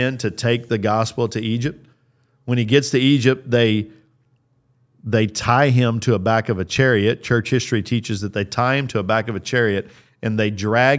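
A speech recording with nothing technically wrong to report. No faults turn up at any point in the clip.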